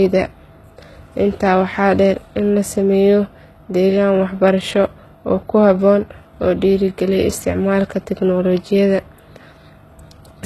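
From start to finish the speech carries plainly audible HE-AAC compression damage, likely from a very low-bitrate encode, consistent with roughly 16 kbps. The treble is not the original but is synthesised by copying lower bands upward, so s sounds come out gritty and metallic, with harmonics that fail to line up above the crossover. On a spectrogram the upper region looks smeared and blocky, echoing the lower bands, and everything stops sharply at 12.4 kHz.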